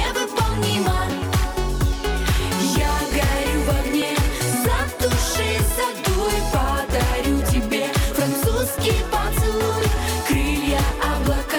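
Two devices likely ran on separate clocks about 500 ppm apart, so the buffer between them periodically dropped or repeated a block of around 70 samples. These clock drift buffer slips sound as about four clicks, one every 2.9 s from 1.12 s to 9.81 s.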